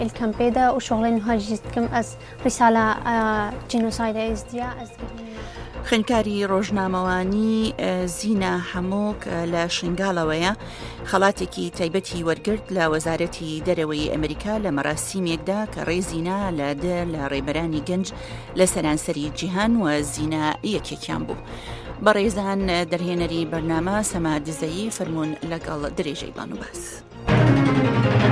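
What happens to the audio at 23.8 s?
Nothing goes wrong at 23.8 s; the audio plays through that moment intact, with no dropout, click, distortion or other fault.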